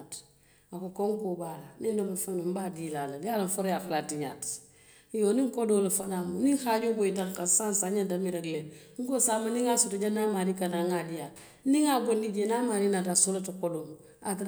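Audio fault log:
Nothing to log here, as the speech comes across without any audible technical trouble at any point.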